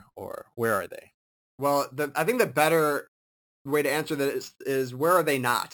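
A speech recording with imaging from sample-and-hold upsampling throughout. Each sample was repeated from 12 kHz to 44.1 kHz, leaving a metallic fizz about 17 dB down. On a spectrogram, mirrored speech harmonics fill 6 to 12 kHz, and a zoomed waveform shows stair-steps.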